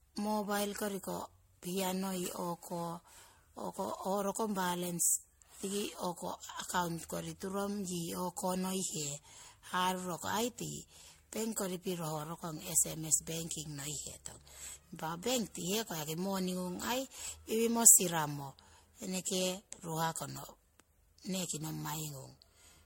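Generation loss runs through the whole speech clip: the sound is swirly, smeared and hollow, consonant attacks are blurred, and nothing reaches above 16.5 kHz. That is more damage than a single lossy encode would leave, and it fits speech that was likely decoded and re-encoded around seven times through MP3 at about 64 kbit/s. Each new pass quantised the signal again on a shifted frame grid, so the noise and spectral gaps piled up.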